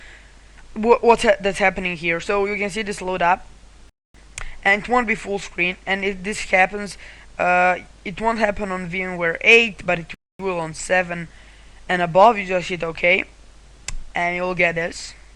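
At 3.89 s and again at 10.14 s the audio drops into a 250 ms hole: a gap between chunks. The audio arrives in 6-second blocks and silence is inserted at each join, so the material is delayed and interrupted rather than lost.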